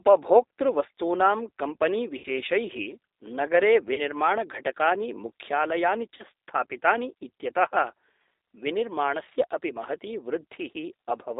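A speech recording carried over a G.729 codec line for its full length, where the 8 kbit/s encoding is plainly audible as a rough, slightly synthetic voice. The coder rebuilds each 10 ms frame from a vocal-tract filter, a pitch predictor and a handful of pulses, so the fine texture of the voice is lost. On a spectrogram the energy sits in a band from about 300 Hz to 3.7 kHz, with nothing above it. Three short VoIP packet loss gaps are concealed by the speech codec. The first runs from 2.18 to 2.27 s, with 60 ms missing, which fits three lost packets. The second runs from 3.94 to 4.02 s, with 40 ms missing, about two packets. The third runs from 6.17 to 6.23 s, with 20 ms missing, one packet. In each gap the decoder repeats its last pitch and filter at falling gain. The voice therefore smears into a brief buzzy tone or coloured noise that fades, then sounds weak for a moment as the frames rebuild. 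A spectrogram shows flat, stretched bands in these spots, and the waveform envelope sags before recovering.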